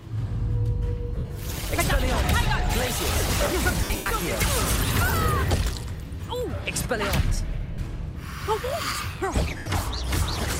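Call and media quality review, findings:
Lost LE Audio frames at 1.16–1.30 s, 3.78–4.06 s, 7.74–7.78 s and 9.58–9.66 s. Tonal content smears into a noisy wash: the LC3 decoder conceals gaps by replaying the last spectrum with randomised signs. Worst at 3.78 s, with 190 ms lost across 280 ms and the longest run around a tenth of a second, long enough to fade audibly toward silence. Other gaps: 120 ms over 140 ms, then 40 ms and 80 ms. Fits 10 ms frames dropped on the Bluetooth link.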